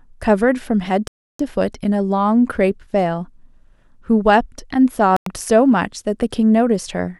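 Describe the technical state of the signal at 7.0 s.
At 7.0 s the signal is intact, with no dropout, clipping, distortion or other technical fault.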